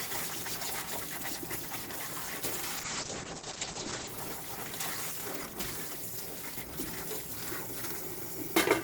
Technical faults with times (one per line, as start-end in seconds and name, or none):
2.79-4.15 call bitrate drop